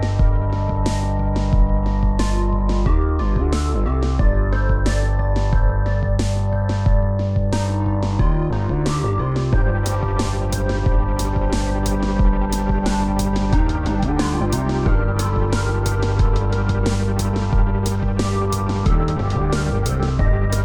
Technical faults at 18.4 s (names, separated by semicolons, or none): none